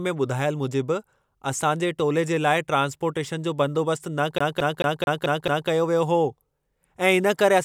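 From 4.38 to 5.70 s the CD is stuck on one turn. A scratch keeps knocking the laser back one track at the same point on each rotation, so the player rereads the same patch of disc instead of moving on. The speech is replaced by one 0.22 s fragment repeating six times, about four to five times per second, each pass ending in a brief mute at the jump. The result is the rapid, evenly spaced stutter of a skipping CD.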